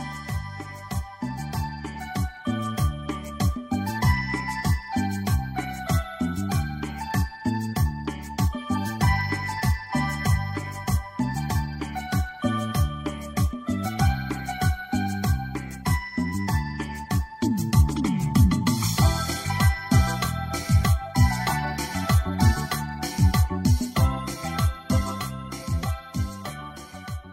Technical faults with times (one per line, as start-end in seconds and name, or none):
0.00-27.32 block size mismatch (truncated)